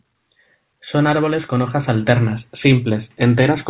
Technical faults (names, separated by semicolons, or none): none